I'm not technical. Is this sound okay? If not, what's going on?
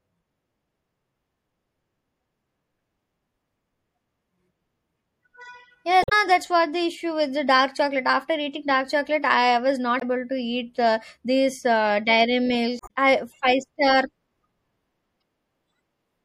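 No. Throughout, the speech has a watery, swishy quality, with dull treble and metallic chirps on s sounds. That is likely MP3 compression: the file was squeezed hard, so the encoder threw away the high frequencies and faint detail it judged unimportant.

There are also brief squawks or blips at 6.01 to 6.12 s (just before "that's what the issue"), 9.97 to 10.03 s (between "dark chocolate I was" and "to eat uh these"), 12.77 to 12.90 s (between "uh these uh dairy" and "I five"), and 15.20 to 15.22 s. These are damaged data in a compressed stream: small pieces of the file are corrupted, so the player briefly misreads them.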